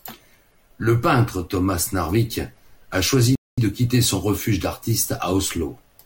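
Speech clip with one rebuffering stall from 3.35 to 3.58 s. Playback drops to silence for about 0.22 s, then resumes exactly where it stopped. Nothing is lost, but time is added.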